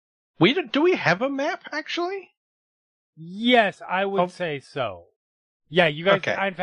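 No technical faults are audible.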